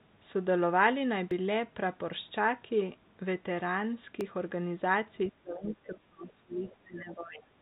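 At 1.31 s and again at 4.21 s the sound jumps forward slightly, likely a dropped buffer from an overrun, skipping roughly 10 ms and 5 ms respectively. From 5.27 s to the end, the talker's speech dips and breaks up, falling by around 20 dB at its lowest. That sounds like speech suppressed in double talk, where the echo canceller likely treats both sides as echo while they talk over each other. Within that stretch, two faint scraps of a second voice come through, at 5.68 to 5.75 s and 6.65 to 6.73 s, sitting about 20 to 25 dB under the talker. That's likely the other side's voice leaking through from the loudspeaker into the mic. The whole clip is band-limited with nothing above 4 kHz, which fits a G.711 call path.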